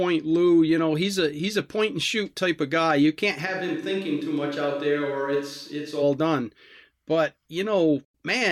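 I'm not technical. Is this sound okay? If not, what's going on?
No. A switch to a distant microphone happens from 3.47 to 6.01 seconds. The speech suddenly turns roomy, hollow and thinner, a bit quieter, with more background noise, then snaps back. Likely the close microphone dropped out and a farther one filled in.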